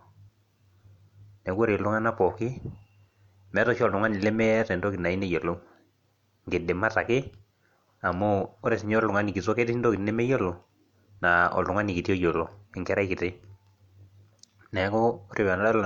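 Nothing stood out as a technical fault on listening to this speech recording.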